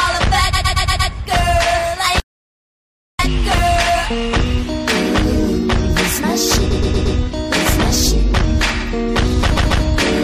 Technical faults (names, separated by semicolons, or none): repeated frames; audio dropout to silence